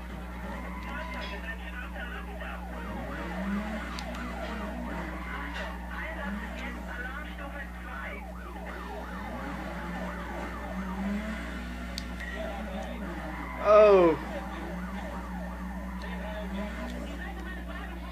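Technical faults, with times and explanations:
Throughout, mains hum: a steady low 60 Hz tone sits under everything, only about 5 dB below the sound itself, so it is plainly audible. Power-line current is leaking into the signal path, most plausibly through a ground loop or a nearby transformer's stray field.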